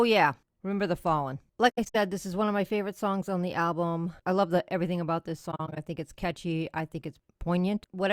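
At 1.69 s, just before "this is one of", the speech drops into soft gaps until 1.96 s. This is AAC frame loss with muting. Lost frames were zeroed by the decoder, and overlapping windows fade each hole in and out. About 170 ms goes missing, the longest gap near a tenth of a second. A similar break runs 5.51 to 5.78 s, between "the everything about this" and "think it's catchy I", in shorter pieces.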